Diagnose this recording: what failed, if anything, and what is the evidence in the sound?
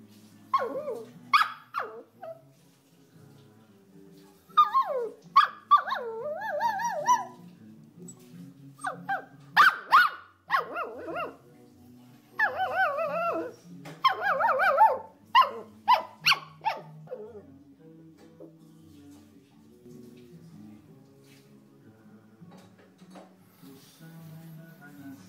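From 17.08 s to 19.86 s the sound turns hollow and phasey, then returns to its earlier character. That is channel delay (comb filtering) at the driver or buffer stage: one channel arrives around 10 ms late and the pair is summed to mono. Energy common to both channels cancels at fixed, evenly spaced notches, the first near 50 Hz and then roughly every 100 Hz upward.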